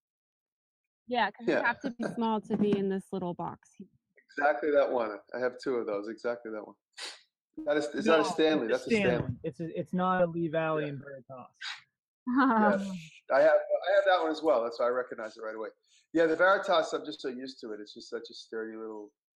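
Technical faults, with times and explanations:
1.91–2.01 s and 7.59–7.68 s, burst of packet loss: about 80 ms dropped each time. The receiver stretches the last sound, fading it out, then resumes slightly ahead. This appears as a smeared, decaying patch in the spectrogram and a shrinking waveform envelope.
8.48–8.51 s, 10.15–10.21 s, 11.01–11.04 s, 16.32–16.36 s and 17.14–17.20 s, short concealed packet loss: 20–40 ms gaps are patched by extrapolating the preceding sound, heard as brief smears or wobbles. They show as thin blurred vertical strips.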